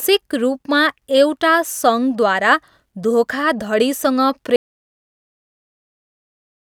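At 4.56 s, right after "सङ्घद्वारा धोखाधडीसँग", an audio dropout to silence cuts the speech mid-flow; likely an input loss, leaving silence without room tone through the end.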